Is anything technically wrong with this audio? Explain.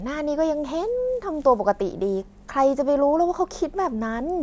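No, nothing technically wrong stood out on listening to this speech recording.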